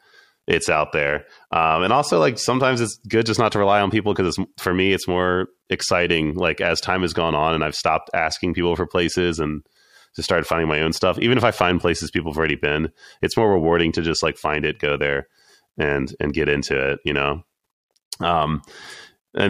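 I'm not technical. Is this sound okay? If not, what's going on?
Yes, nothing stood out as a problem when listening to this recording.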